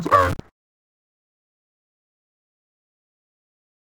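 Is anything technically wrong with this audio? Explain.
Yes, there's interleaved audio read as planar throughout: 5.33 ms blocks, fitting 256 samples, get split into half-speed halves, so it sounds dull and robotic with a 188 Hz buzz.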